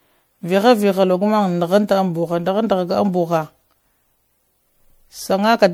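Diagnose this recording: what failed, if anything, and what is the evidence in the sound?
The codec stage is where this went wrong. The speech sounds swirly, hollow and smeared throughout, with attacks blurred and content reaching up to about 20.9 kHz. That points to generation loss, likely around five MP3 passes at something like 96 kbit/s, each requantising on a shifted frame grid.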